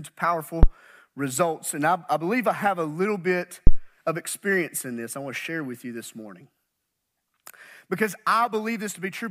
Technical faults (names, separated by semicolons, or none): phantom power thump